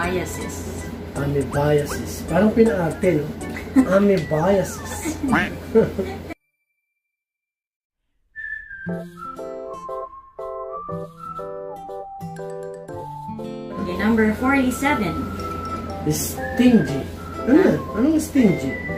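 No technical faults can be heard anywhere in the clip, and the signal holds steady throughout without any dropouts, distortion or interruptions.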